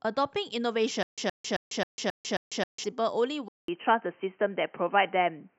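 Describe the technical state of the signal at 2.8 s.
Stutter with silent gaps, 1.03 to 2.84 s, covers 2.8 s. A 121 ms speech fragment repeats six times, each followed by 147 ms of digital silence in a 268 ms cycle, likely a stalled stream replaying its last fragment. The audio due there is lost.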